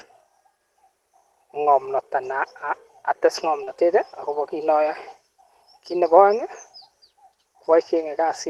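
At 3.63 to 3.69 s, just before "akobo kiit", a short concealed packet loss briefly smears the sound. About 40 ms never arrived, and the receiver covered roughly 33 ms by extending the preceding sound before blending back. On a spectrogram, the preceding sound stretches flat and blurred across the gap.

Overlapping its tail, at 3.67 to 3.69 s, and again at 4.87 to 4.89 s, right after "akobo kiit", a lost packet was rebuilt from error correction. Each time, a 20 ms low-bitrate copy replaces the original, giving a rough, noisy patch with no gap. This shows as grainier, less defined harmonics in a thin vertical strip, beneath the Opus call path's cut-off near 12 kHz.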